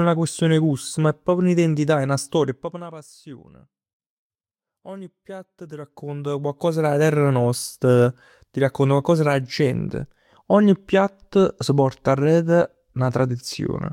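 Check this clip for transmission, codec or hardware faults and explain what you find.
Nothing wrong can be heard in the speech here. Where the level is turned up or down, it moves smoothly, as a fader would, with no jumps or steps.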